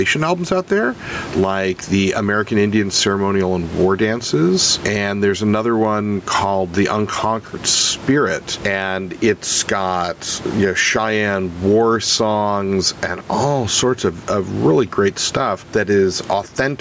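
Gain pumping runs throughout the speech, with the gain swinging roughly 15 dB. Unlike a noise gate, the background never drops to silence. The likely cause is excessive gain with a fast limiter.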